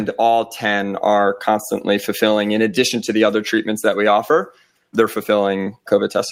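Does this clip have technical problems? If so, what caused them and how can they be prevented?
Yes. Clock drift between sender and receiver runs through the whole clip: the sender's clock is about one and a half percent slow, so the receiver's buffer keeps draining. On a waveform this shows as a gradual lag rather than any single visible break. Prevent it by locking both ends to a common clock or using drift-compensating resampling.

Repeated timing corrections follow from 0.36 s to 5.96 s. The receiver keeps repeating small pieces, so the speech plays at about 98% speed and stretches by roughly a tenth of a second overall. Tiny duplicated slivers and seams appear unevenly spaced on a spectrogram. Prevent this with smooth adaptive resampling instead of repeating pieces.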